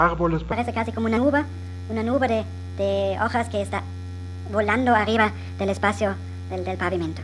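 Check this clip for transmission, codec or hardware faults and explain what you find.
There's one fault here. From 0.52 s to the end, a wrong sample rate makes the sound run 1.5 times fast and about 7 semitones high. That fits 16 kHz audio played at 24 kHz without conversion.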